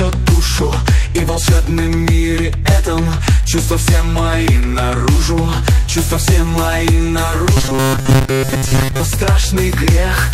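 From 7.57 to 9.00 s the sound collapses into robotic sound from repeated short buffers: a rigid, metallic buzz locked at 133 Hz, likely from about 7.5 ms segments being replayed while most of the real audio is skipped. Unlike ordinary distortion, the buzz rate stays fixed regardless of the material.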